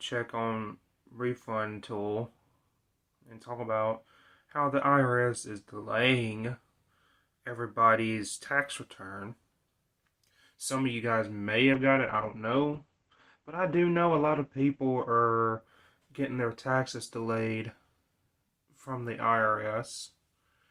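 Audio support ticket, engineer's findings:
Call bitrate drop, 11.74 s to 17.11 s. Audio turns muffled and rough, with top end gone above 8 kHz, down from 20 kHz. Worst for about 3.05 s. Probable component: encoder rate control following a falling bandwidth estimate. Coarser coding fits a fall from 48 to roughly 13 kbps. Clears once the rate recovers.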